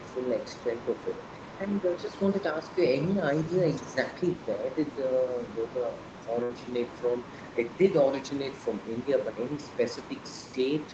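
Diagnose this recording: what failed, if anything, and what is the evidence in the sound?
Call processing, echo cancellation. Throughout the clip a second voice sits faintly behind the talker, about 20 dB down. This is the other side's voice leaking through. It was likely played on the talker's loudspeaker, and the echo canceller left a residue in the microphone signal.

Call processing again, during double talk. The talker's level dips about 10 dB within 0.32 to 0.95 s, for roughly 0.3 s in total. Smaller dips of about 5 dB come at 1.65 to 2.79 s and 3.85 to 4.0 s. This is speech suppressed in double talk, likely because the canceller attenuated everything while both sides spoke.

Network and jitter buffer. At 6.43 to 6.53 s there is a burst of packet loss. The last sound is stretched for about 62 ms and fades away. Playback then resumes with roughly 60 ms missing. The 8 kHz bandwidth of the Opus path is expected.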